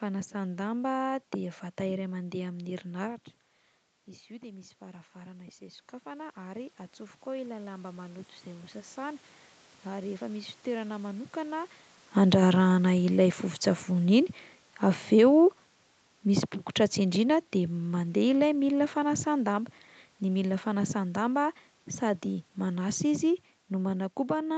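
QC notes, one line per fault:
4.27–11.64 s, automatic gain rising: after the voice drops by about 16 dB around 3 s as the talker moves back, the gain control slowly raises its gain by about 10 dB. Unlike a talker coming closer, the room noise swells along with the voice.
12.08–21.52 s, automatic gain falling: the talker comes close again near 12 s, so the voice arrives loud, and the gain control then eases its gain down by about 10 dB. The voice and the room noise sink together, which a simple move away from the microphone would not cause.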